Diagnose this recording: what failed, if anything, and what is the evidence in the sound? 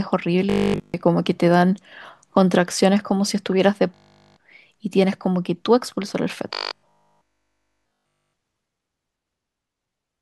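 Robotic sound from repeated short buffers at 0.5–1.0, 3.9–4.4 and 6.5–8.3 s: a rigid 50 Hz buzz, likely a starved driver buffer looping its last 20 ms.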